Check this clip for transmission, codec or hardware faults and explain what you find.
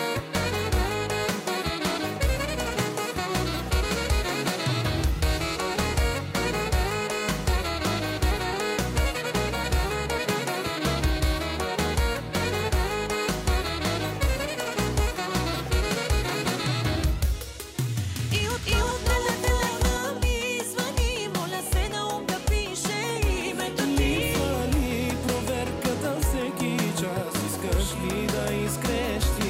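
One fault turns up. From 18.19 to 19.97 s the sound is heard twice, a dry, equally loud copy trailing about 0.3 s behind: a doubled audio track, likely from a second, slower capture path.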